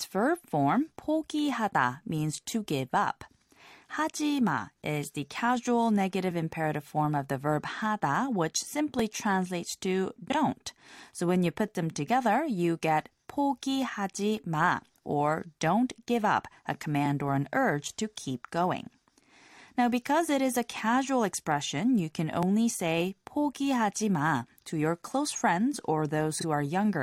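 Frames out of order at 10.30–10.35 s and 26.39–26.44 s: two adjacent 23.2 ms blocks play swapped, giving a brief garbled flutter.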